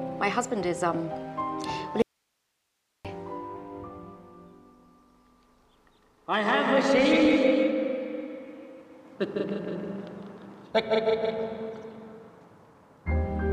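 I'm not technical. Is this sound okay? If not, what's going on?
No, there's one clear problem. From about 2.02 to 3.05 seconds the sound suddenly vanishes for roughly a second and then snaps back, and during that gap all you hear is a faint hiss. That's called an audio dropout to a faint residue. The most likely cause is that the signal got lost somewhere along the way while the equipment after the break kept running, so only its own background hiss came through. The cut is abrupt, not a natural pause or fade.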